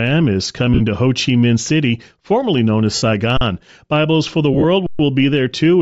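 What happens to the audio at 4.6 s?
From 4.54 to 4.65 s there are lost LE Audio frames: about 60 ms of audio drops out in patches across roughly 105 ms, the longest gap around 30 ms. The decoder repeats the last spectrum with scrambled phase, so the sound smears into brief noisy hiss. On a spectrogram, harmonics blur into grainy columns; on the waveform, the envelope flattens and wobbles. The sound throughout also carries plainly audible Bluetooth LC3 compression, likely at a low bitrate. Its breathy, grainy upper band appears on a spectrogram as a noise-filled top edge.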